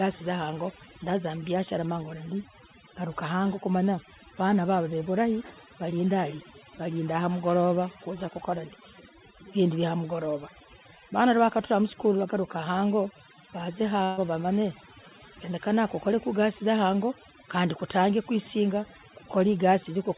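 Throughout the recording, a noise reducer set far too aggressively cuts individual frequency bands whenever they sit near its noise estimate, removing quieter parts of the speech along with the noise. The result is overdone noise removal: near-silent gaps sprinkled with twinkling specks, and a voice that also stops short at 4 kHz from the call line.

From 14.04 to 14.19 s, a burst of packet loss leaves the receiver without audio. It extends the last sound for about 132 ms, fading it out, so the speech turns briefly into a held buzz or dying hiss. Playback then picks up later, with roughly 140 ms of speech gone.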